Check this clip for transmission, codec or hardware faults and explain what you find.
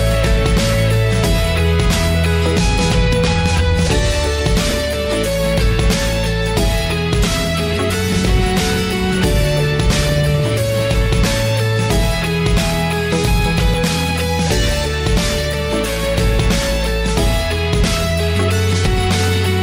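Three faults are audible: one ordering error and two short decoder glitches.

Chunks out of order, 4.70 to 4.72 s: a 10 ms chunk arrives one chunk late and plays after its successor. Nothing is lost, but the swapped order creates hard joins, heard as a brief jumbled moment.

Damaged data in a compressed stream, at 13.74 s and 18.86 s: corrupted bytes make the decoder misread frames and resynchronise on the next header. Each is heard as a short chirp or blip of roughly 15 ms.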